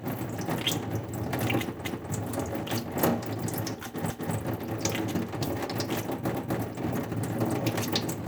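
At 1.85 s, the audio stutters. A quarter-second stretch, from 1.85 to 2.1 s, plays twice. The same thing happens at 4.1 to 4.35 s and again at 6.35 to 6.6 s. These are overlapping chunks. The sound was handled in 2-second blocks, and each new block began 250 ms before the previous one finished. Every join therefore repeats that overlap. It is heard as a regular hiccup with a click at each seam.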